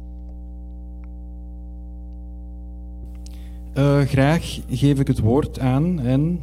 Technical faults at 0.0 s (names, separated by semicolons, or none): mains hum